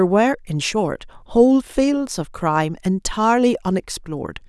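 No technical faults can be heard anywhere in the speech recording; the signal stays continuous and steady throughout.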